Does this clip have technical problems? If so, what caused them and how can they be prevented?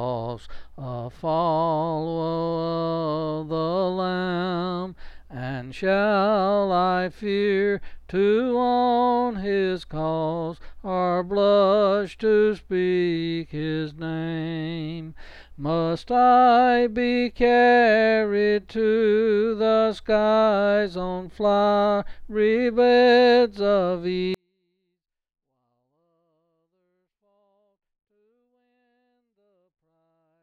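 Yes. From 24.34 s to the end at 30.42 s, a 24-bit alignment error drops the sound by about 48 dB at once. The 24-bit samples sit in the low bytes of 32-bit words but are read as full 32-bit integers. Unlike a fade-out or dropout, the change is instant and the sound stays clean, just barely audible. To prevent it, declare the sample format and byte alignment explicitly so the reader and writer agree.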